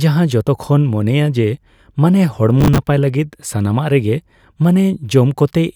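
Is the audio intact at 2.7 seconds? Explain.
No. At 2.7 seconds the speech is caught in a burst of processor overload crackle running from 2.61 to 2.78 s. Over those 0.17 s the processor repeatedly fails to deliver its audio blocks on time, roughly ten misses of around 10 ms each, and every late block is filled by replaying a scrap of old audio. Those hard-edged repeats stack into a gritty, tearing crackle over the speech that clears once the load eases.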